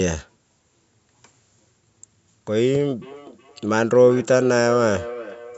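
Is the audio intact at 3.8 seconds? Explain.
No. At 3.8 s the clip is inside a feedback echo between two devices, running from 3.02 s to the end. A second device replays this audio. The first device's microphone captures it again, uncancelled. The sound returns roughly every 0.4 s, thin and ringing, peaking about 15 dB below the speech.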